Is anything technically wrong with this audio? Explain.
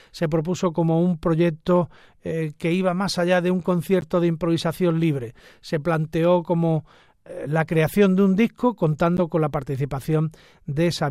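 Yes. Corrupt frames were decoded twice: from 4.01 to 4.04 s, between "más allá de un" and "de improvisación libre", and from 9.17 to 9.19 s, after "creación de un disco" and before "con la". Flipped bits in the compressed data gave the decoder wrong gains and codes, which put energy at the wrong frequencies. Each one is a short chirp-like blip. The first is fairly quiet, peaking around -25 dBFS, and sounds like a single damaged frame. The second is louder, near -15 dBFS, and sounds like a few frames in a row.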